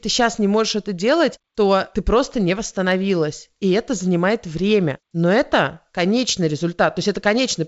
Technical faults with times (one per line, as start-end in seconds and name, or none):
none